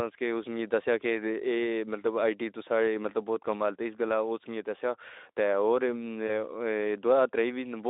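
VoIP packet loss concealed by the speech codec, at 6.28 to 6.30 s, just after "تے اور": about 20 ms of speech, which fits one lost frame, is filled by extrapolating the preceding pitch and filter, heard through the narrowband Speex line as a brief stretched, fading smear before speech returns, staying weak or distorted for tens of milliseconds.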